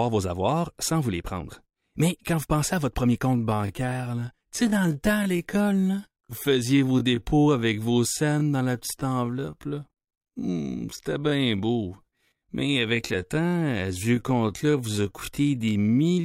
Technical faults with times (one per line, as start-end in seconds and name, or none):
3.25-16.17 time-stretched section